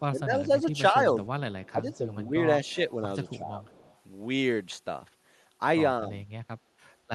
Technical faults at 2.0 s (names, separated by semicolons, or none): speech suppressed in double talk; echo leak